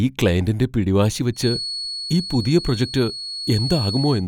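From 1.31 s to the end, a feedback whistle at 4.4 kHz, roughly 10 dB below the speech, whistles thinly, swelling and fading slowly, likely from a loudspeaker-microphone loop near instability; a spectrogram shows one persistent horizontal line.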